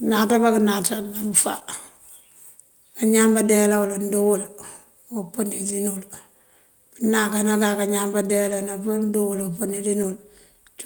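From 1.59 to 1.63 s, a short concealed packet loss: about 20 ms of audio arrived too late, and the receiver extended the preceding sound for roughly 12 ms before crossfading back. It sounds like a quick smear or wobble.

Four lost packets were rebuilt from error correction, one each at 3.93–3.95, 5.69, 8.51–8.53 and 10.03–10.05 s. In each case the decoder played a 20 ms low-bitrate copy, so nothing drops out, but that frame sounds briefly rough and hissy. A spectrogram shows a thin, noisier vertical slice.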